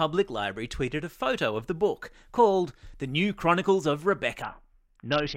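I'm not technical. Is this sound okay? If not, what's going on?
No. At 4.42 s the sound turns dull and gritty, and it stays that way until the clip ends. This is a Bluetooth SBC bit pool drop. The wireless link got crowded, so the phone sent the audio using far fewer bits to keep it flowing. With so little data, the high, crisp part of the sound gets dropped. What's left is roughly packed, which adds a rough, sandy noise.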